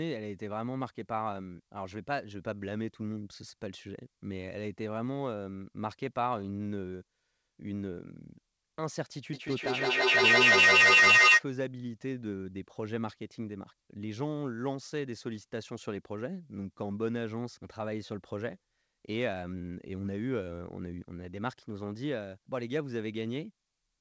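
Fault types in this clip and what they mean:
Feedback echo between two devices: from 9.33 to 11.46 s the speech returns roughly every 150 ms as a chain of repeats, each thinner and more ringing, because a second device in the room replays the call and its microphone sends it back past an echo canceller that only removes its own playback. The loop is loud, peaking about 14 dB above the speech, so the repeats build up rather than fade, unlike a single echo or room reverberation.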